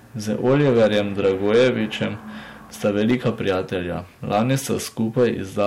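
Harsh crackle rides on the loudest moments of this speech recording from start to finish, with the peaks sounding brittle and fuzzy rather than rounded. It is hard clipping: the signal was driven about 8 dB beyond what a stage in the chain could pass, so every peak that exceeded that ceiling was sliced flat. Only a small share of the audio, around 2 percent, crosses the limit, but each flattened top adds high harmonics that surface as that crackle.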